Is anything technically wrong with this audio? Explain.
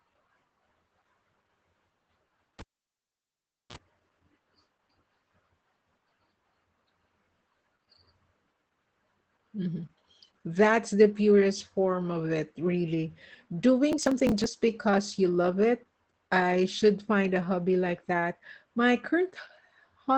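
Yes, there are three faults.

Throughout the clip the speech sounds muffled and hoarse, with a slightly robotic edge and nothing audible above about 8.7 kHz. This is plainly audible Opus voice compression. The encoder's SILK linear-prediction coder is working in wideband mode and spending too few bits on the excitation, which fits a bitrate near 12 kbps. It rebuilds the voice from a coarse model in 20 ms frames and discards the top of the spectrum.

From 2.59 to 3.76 s, a pop drops the sound into near silence for about 1.12 s. A short burst of 60 Hz mains buzz, about 35 ms long, follows, and then a second pop brings the audio back. This is a cable pulled and plugged in. The first pop is the live connection breaking. The buzz is the plug's tip touching the jack before the ground makes contact, and the last pop is the circuit closing again.

From 13.92 to 14.47 s, a gritty, tearing crackle rides on the speech and then stops. 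This is processor overload crackle. The processor kept missing its deadlines for filling each small audio buffer, which points to buffers of roughly 10 ms and a run of around thirty misses. Each missed buffer was skipped entirely, leaving a hard-edged gap. Packed together, those gaps are heard as a burst of crackle.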